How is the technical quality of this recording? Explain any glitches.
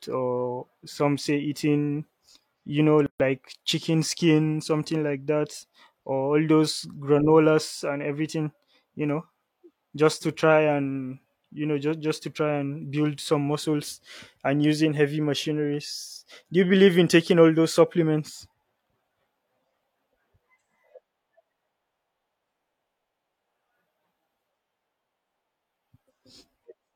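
The recording has one glitch, a gap at a join of encoded pieces. At 3.06 to 3.20 s, between "you know" and "chicken skin something like", the speech drops into about 137 ms of silence with smeared edges, then resumes where it stopped. The pieces were encoded separately and joined untrimmed, leaving encoder start delay and final-frame padding in place.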